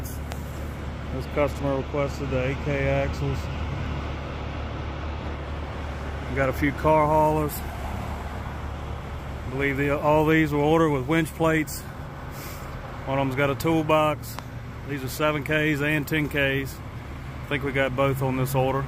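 A loud pop lands at 0.32 to 0.34 s, and a second one at 14.39 to 14.41 s. Each is a single sharp click standing well above the surrounding sound, peaking roughly 15 dB louder, while the audio continues unbroken beneath it. The likely cause is a sudden voltage pulse entering the signal path, from a connector, switch, static discharge or driver glitch. The downstream circuitry shaped that jolt into the brief, percussive snap heard here.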